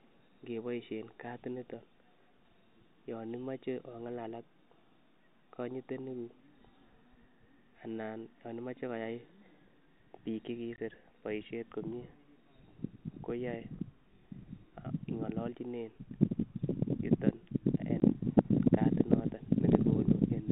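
At 10.76–10.78 s, just before "boishet komie", and again at 18.00–18.02 s, right after "yuton en", packet loss filled with silence cuts a 20 ms hole in the speech, which fits a single lost packet each time. Each gap has hard edges, showing as a flat, near-silent stretch in the waveform and a thin blank vertical stripe on the spectrogram, beneath the 4 kHz ceiling of the G.711 telephone coding.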